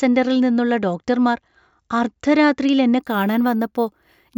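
Speech with imaging from sample-and-hold upsampling from 2.99 s to the end. Samples repeated from 16 kHz to 48 kHz add metallic fizz about 24 dB down. On a spectrogram, mirrored harmonics fill 8 to 16 kHz. The waveform shows staircase steps.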